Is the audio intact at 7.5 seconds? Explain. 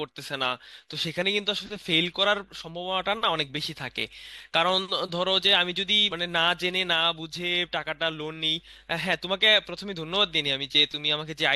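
Yes, the speech at 7.5 seconds plays through cleanly, with no dropout, click, distortion or other fault at that moment.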